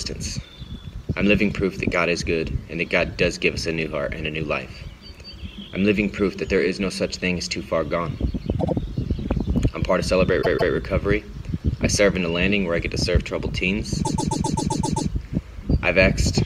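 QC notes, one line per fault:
8.58–15.09 s, repeated frames: short blocks of compressed audio replay as stutters. A 78 ms block plays twice more at 8.58 s, a 157 ms block twice more at 10.41 s, and a 131 ms block eight more times from 14.04 s, adding about 1.5 s overall.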